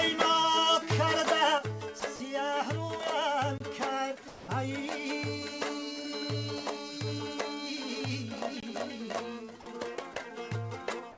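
From 1.58 s to the end, one channel drops out: the level falls abruptly by about 6 dB and stays down. This is likely a lost stereo channel folded to mono, not a fade.

At 2.00 s, 2.16 to 2.20 s and 4.28 to 4.48 s, steady noise takes the sound's place. These are sounds dropped by the voice detector, likely with comfort noise filling in. The last one covers 200 ms, with 150 ms of sound actually lost.

At 3.58 to 3.60 s and 8.60 to 8.63 s there is a gap between chunks. Each is a short hole of about 23 ms, recurring every 5.0 s, and no sound is lost around it.

The call path's band limit, with nothing above 8 kHz, holds throughout.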